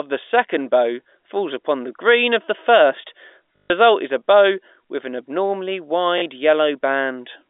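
Packet loss with last packet repeated at 3.56 to 3.70 s and 6.18 to 6.22 s: a replayed fragment gives a buzzing robotic stutter.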